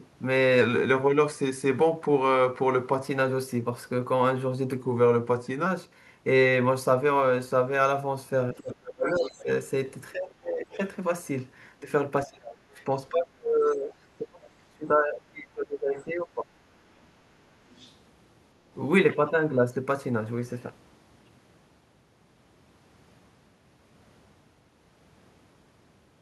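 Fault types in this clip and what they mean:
Drift correction step: From 0.61 to 3.04 s and again from 4.82 to 5.66 s the speech plays about 5.8% slower and drops 104 cents, roughly a semitone, before snapping back to normal. Speed and pitch move together and the level stays steady, so it is not a pitch-only effect or a gain change. The likely cause is clock-matching software changing the playback rate in one step to manage its buffer.
Speech suppressed in double talk: The talker's level sinks sharply, by up to about 30 dB between 8.53 and 9.48 s, about 20 dB between 10.12 and 10.79 s, and about 25 dB across 11.79 to 16.49 s, where around four seconds are dulled or broken up. Unlike a dropout, each dip lines up with a second voice being present, which points to an echo canceller likely pulling down everything while both sides talk at once.
Other side's voice leaking through: A second voice can be heard under the talker: a stretch from 8.58 to 9.43 s about 10 dB below the speech, brief scraps at 10.73 to 10.77 and 12.80 to 12.84 s, and a faint patch from 17.70 to 17.93 s about 30 dB down. 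It is a separate voice rather than a repeat of the talker, which sets it apart from ordinary echo. It is likely loudspeaker sound that the echo canceller left in the microphone signal.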